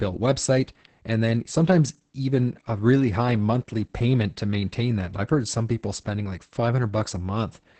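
From start to finish the speech carries Opus voice compression in its SILK linear-prediction mode, with nothing above about 8.7 kHz. Coarse excitation coding leaves the voice muffled, hoarse and faintly robotic, heavy damage that points to a bitrate near 10 kbps.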